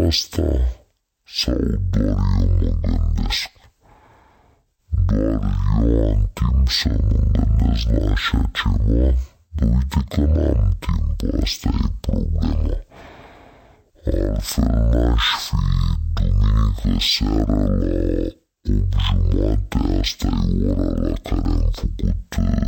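From start to finish the speech shows a stereo read as mono fault: interleaved left and right samples were read one after another as a single channel. Everything plays at half speed and an octave low, with a fainter mirrored copy in the upper spectrum.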